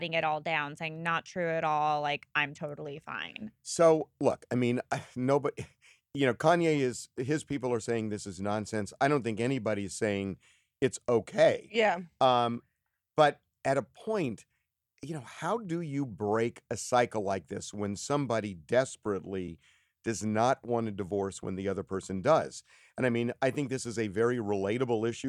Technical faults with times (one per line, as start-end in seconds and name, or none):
19.48 underrun with held sample